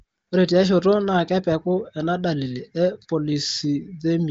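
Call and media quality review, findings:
No findings for this call and media quality review: the speech passes through the AMR wideband (HD Voice) codec path with no audible damage, and its band-limit near 7.8 kHz is expected for that path.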